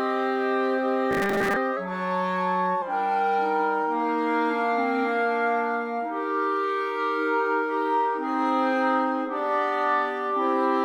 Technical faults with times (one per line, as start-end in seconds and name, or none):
1.11-1.57 robotic sound from repeated short buffers
1.77-2.82 drift correction step